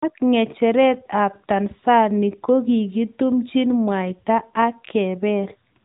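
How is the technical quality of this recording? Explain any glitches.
The recording has one fault that runs throughout: the speech has passed through an AMR narrowband mobile codec. From start to finish, vocal-tract modelling at what sounds like a mid-range bitrate near 10 kbps leaves plainly audible buzzy, synthetic speech. A spectrogram shows nothing above 3.8 kHz, a flat empty ceiling.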